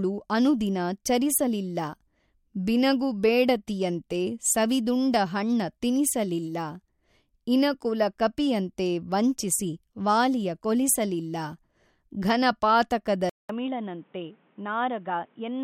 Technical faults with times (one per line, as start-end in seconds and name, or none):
13.29-15.64 input switched to a poorer device